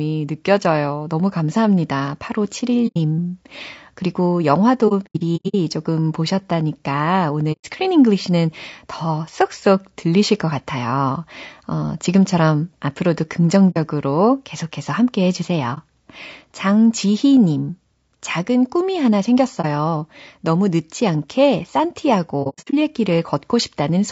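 Throughout, the speech sounds rough and grainy, with noise between harmonics and a thin top band, likely from low-delay AAC compression (AAC-ELD) at a rate near 32 kbps. AAC frame loss with muting causes soft-edged dropouts, where the decoder silenced the missing audio and faded it out and back in. These occur at 2.87–2.97 s, 4.88–5.55 s (scattered gaps, the longest about 100 ms), 7.52–7.65 s, 13.70–13.77 s, 15.74–15.78 s, 19.61–19.65 s and 22.43–22.74 s (again scattered, up to about 100 ms).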